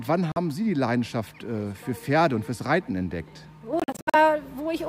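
At 0.32 s the sound cuts out for about 43 ms, and from 3.80 to 4.15 s it breaks up into several gaps, the longest about 64 ms. It resumes as if it had played on, a pattern that points to a likely Bluetooth dropout. On a waveform or spectrogram these show as abrupt, full-band blank strips.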